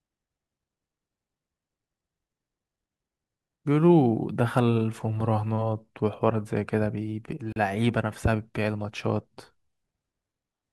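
A speech recording with one brief dropout: at 7.53 to 7.56 s the sound cuts to complete silence for about 36 ms and then resumes. This is likely a Bluetooth stall, where radio interference delayed packets long enough for the headphones' buffer to empty and playback to pause.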